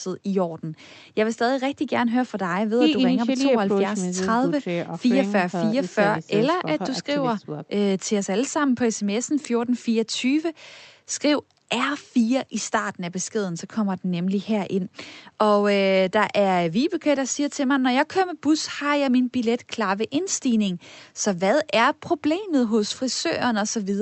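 Listening closely to the speech, nothing stood out as a technical problem at any point.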